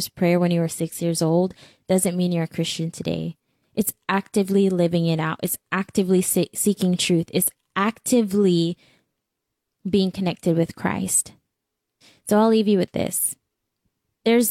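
Speech recording, with no technical faults audible anywhere in it.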